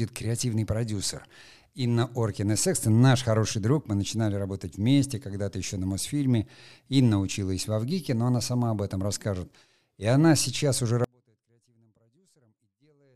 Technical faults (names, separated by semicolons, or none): audio dropout to a faint residue